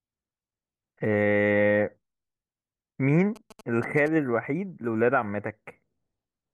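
A speech recording carries GSM signalling bursts from 3.36 to 4.08 s: a galloping dit-dit-dit of short buzzes at a 217 Hz repetition rate, sitting well below the speech. A nearby 2G phone exchanging brief control bursts is radiating into the audio circuitry, which rectifies them. Unlike steady mains hum or the continuous buzz of an active call, it arrives in short irregular clusters and then stops.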